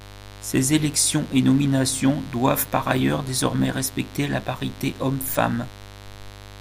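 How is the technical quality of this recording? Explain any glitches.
The speech is marred by one fault running through the whole clip. Mains buzz sits underneath from start to finish: switching spikes at twice the 50 Hz mains rate throw harmonics up into the kilohertz range, giving a steady, raspy buzz roughly 20 dB below the speech.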